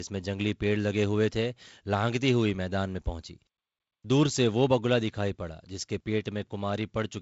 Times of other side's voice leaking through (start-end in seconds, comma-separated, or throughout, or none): none